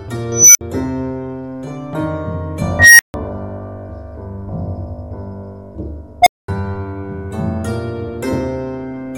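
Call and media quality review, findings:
Unstable filter, 0.32 s, 2.79 s, 6.22 s: tones near 7 kHz, 2 kHz and 700 Hz swell to clipping, then drop out 60 to 220 ms. The dropout separates it from acoustic feedback howl.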